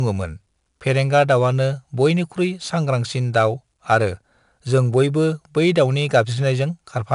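From start to finish the speech carries 4-bit ADPCM compression, each sample coded as a coarse step from a prediction. Its error rides the level as a gritty hiss on louder syllables, with roughness on attacks. Nothing above 10.6 kHz suggests a low sample rate, with a bitrate near 89 kbps.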